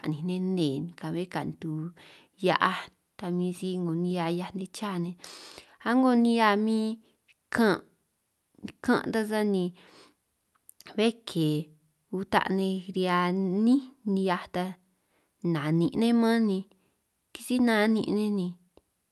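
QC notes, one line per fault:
No faults to note for this speech clip.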